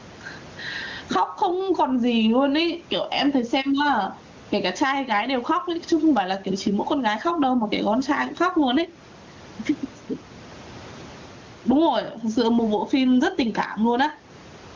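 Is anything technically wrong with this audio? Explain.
Yes. Gain pumping runs through the whole speech clip. The room noise sits about 34 dB below the speech, and the gain swings by around 15 dB. The likely cause is input gain set far too high, with a fast limiter or compressor clamping down on every peak and releasing in the gaps. Loud and quiet passages end up squashed toward one level.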